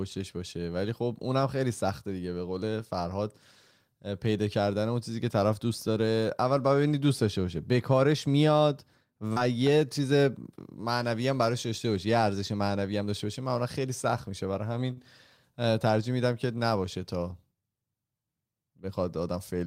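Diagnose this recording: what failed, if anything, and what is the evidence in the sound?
Short stall from a late packet, at the network and jitter-buffer stage: packets arrived late, the buffer ran dry, and the receiver stretched the last sound to bridge the gap. At 9.27 to 9.31 s it holds for 28 ms, and at 14.93 to 14.98 s for 40 ms, giving sounds held too long.

Short concealed packet loss, also on the network side: about 30 ms of speech never reached the decoder in time at 9.33 to 9.37 s, just after the first stall. The receiver extrapolated the preceding sound to cover it, heard as a brief smear where real detail is gone.

Jitter buffer speed-up: having built up more delay than it targets, the buffer trimmed pitch-period slices to catch up. From 12.92 to 13.26 s playback runs at 109% speed with pitch unchanged, shedding roughly 40 ms, so that stretch sounds hurried.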